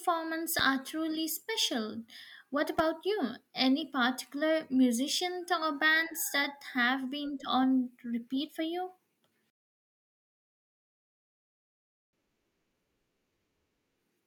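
Loud pops at 0.59 to 0.62 s, just before "truly special", and 2.79 to 2.82 s: single sharp thumps over the speech, likely from brief voltage spikes.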